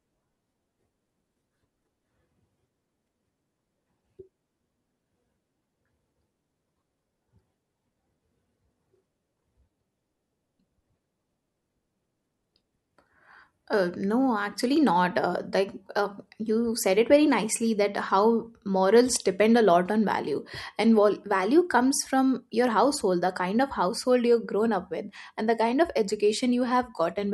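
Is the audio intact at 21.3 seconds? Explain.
Yes, at 21.3 seconds the speech plays through cleanly, with no dropout, glitch or other fault at that moment.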